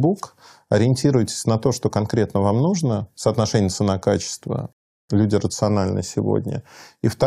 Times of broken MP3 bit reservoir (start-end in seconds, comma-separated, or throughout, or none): none